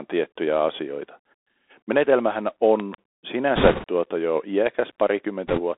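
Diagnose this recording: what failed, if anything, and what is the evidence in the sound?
The whole speech clip sounds boxed-in and gritty, with nothing above about 3.6 kHz, low end cut below 300 Hz, scratchy sibilants and a granular hiss. This is the Bluetooth CVSD headset codec, whose coarse one-bit step tracking fits a 64 kbps headset link, failing at the codec stage.

A loud pop, actually a close pair of sharp pops, lands between 2.80 and 2.96 s, peaking about 10 dB above the speech, which carries on underneath. The cause is likely a voltage step in the analogue wiring or driver, such as a plug, switch or static discharge.

A rushing, crackly noise without hard clicks smears the speech from 3.56 to 3.85 s, just before "tuota jo", and again, lighter, from 5.47 to 5.61 s. These are bit errors on a Bluetooth voice link, at a rate of several percent. Because each CVSD bit carries little weight, the damage shows up as crackle rather than clicks.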